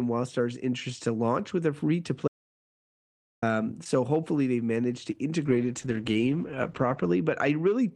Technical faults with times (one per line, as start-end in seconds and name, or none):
2.28-3.42 audio dropout to silence
5.46-7.96 call bitrate drop